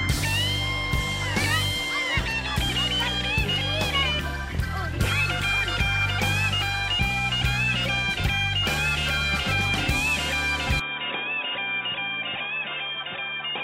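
From 10.80 s the audio turns dull and about 5 dB quieter, likely an input switched to a poorer device. Spectrogram energy stops abruptly at 3.8 kHz, with no gap.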